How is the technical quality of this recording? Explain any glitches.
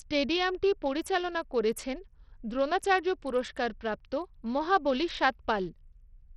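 The recording is compromised throughout by heavy Bluetooth SBC compression damage. Across the whole speech clip, the treble flickers and drops out, and a gritty, grainy noise with aliased edges sits on the sound. The likely cause is SBC coding at a very small bit budget, which fits a bitrate around 64 kbps. With no hearing model steering the bits, the upper sub-bands are starved and the rest are quantised coarsely. On a spectrogram, the top bands would appear blotchy and intermittent, with a speckled noise floor, and nothing above about 20.9 kHz.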